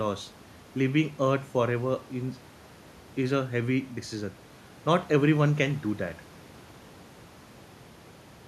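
No audible technical faults.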